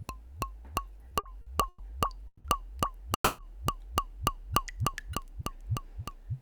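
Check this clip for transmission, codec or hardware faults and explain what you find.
Four transmission faults are audible, all from packets reaching the receiver late rather than being lost. Nothing is missing, but time is stretched.

From 1.09 to 1.81 s there are repeated stalls (stutter). The jitter buffer ran dry four times, and each time the receiver kept the last sound going. That adds 220 ms of filler, about 31% of the span, with the longest hold at 110 ms. The audio drags and catches. On a spectrogram, short smeared bands repeat the preceding frame. In the waveform, brief sustained segments break up the normal envelope.

At 2.27 to 2.46 s and 3.14 to 3.40 s there are two call audio freezes. Each is a single stall, likely caused by packets held up in the network. In the first, the receiver fills 170 ms by extending the last sound, and it fades to silence for its final 50 ms. In the second, it fills 240 ms and ends with 90 ms of silence. 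Each time the audio resumes where it stopped, so the delay grows by the same amounts, 170 and 240 ms. On a spectrogram each freeze shows as a horizontally smeared, fading band ending in a blank strip. In the waveform it is a decaying buzz tapering to flat.

From 4.21 to 5.21 s a jitter buffer slow-down rebuilds reserve. The receiver repeats single pitch periods or pause fragments, adding 44 ms, so playback runs at 96% speed at unchanged pitch. Sounds seem slightly drawn out. A spectrogram keeps the same frequencies but stretches features in time. The waveform shows near-identical cycles repeated back to back.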